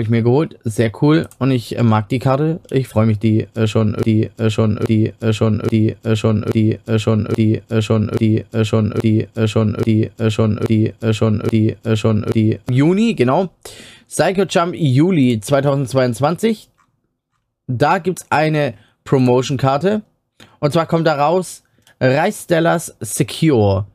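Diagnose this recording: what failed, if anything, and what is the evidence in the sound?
A broken-record loop runs from 4.03 s to 12.69 s. One 0.83 s fragment of speech repeats ten times back to back, identical each pass, and the speech due in that span is lost. Unlike an echo, nothing decays or overlaps. The likely cause is a stalled playback or stream buffer resending its last block.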